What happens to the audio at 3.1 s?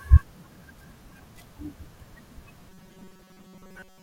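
At 3.1 s the speech has become a rigid, metallic buzz pitched near 188 Hz, still loosely following the words, from 2.69 s until the clip ends at 4.02 s. This is robotic sound from repeated short buffers, likely from audio arriving too seldom, so a roughly 5.3 ms chunk is looped in place of most of the real signal.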